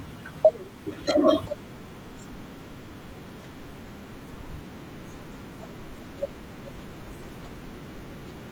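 Compressed frames are skipped twice in this speech, from 0.41 to 0.45 s and again at 6.98 s. Each time the audio jumps ahead by roughly 150 ms, which fits a few whole codec frames of about 43 ms going missing.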